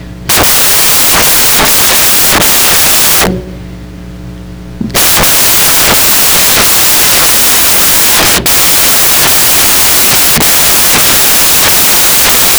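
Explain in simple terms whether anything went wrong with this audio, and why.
Something went wrong for the whole clip: the samples were built from the wrong bytes. The player put each sample's bytes together incorrectly, so tiny rapid details became the loudest part, and you hear loud, harsh noise throughout.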